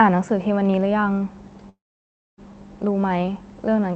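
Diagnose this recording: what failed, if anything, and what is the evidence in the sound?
A call audio freeze occurs in the network and jitter-buffer stage, from 1.69 to 2.40 s: a brief fading buzz, then about 0.61 s of silence. It was likely caused by delayed packets draining the buffer. Unlike a dropout, the speech resumes exactly where it stopped, about 0.69 s late, with nothing missing.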